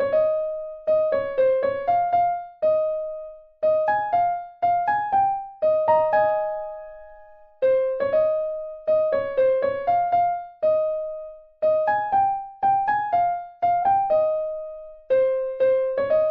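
At 13.82 s the audio has a single brief blip, a glitch lasting only about 14 ms, caused by damaged data in the compressed stream. Bytes in that stretch were corrupted, so the decoder could not read those frames properly, lost sync and had to find the next valid frame header before resuming. On a spectrogram this would appear as a thin vertical disturbance. On the waveform it would look like a short discontinuity breaking the signal.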